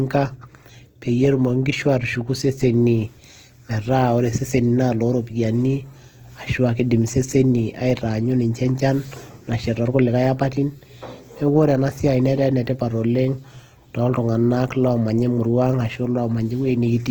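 Opus compression, throughout: the speech sounds rough and grainy, with bands refilled by folded or noise-like content rather than left empty, so there is little swirl. This is likely the music (CELT) mode at a low rate near 16 kbps, keeping fullband content up to about 20.2 kHz.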